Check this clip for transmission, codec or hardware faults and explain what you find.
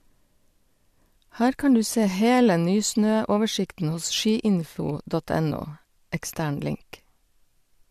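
Nothing stood out on listening to this speech recording.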